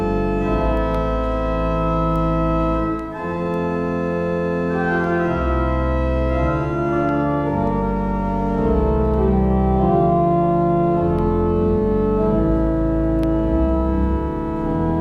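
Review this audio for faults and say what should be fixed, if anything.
Word clock ticks run from 0.77 s to 14.58 s: about ten sharp ticks of uneven strength, spaced roughly every one and a half seconds. The receiving device was clocked independently of the digital source, with a mismatch of around 15 ppm. Each time the two clocks slipped a full sample relative to each other, a few samples were misread and one sample was dropped or repeated. To prevent this, slave the receiver to the incoming word clock or insert a sample-rate converter at the input.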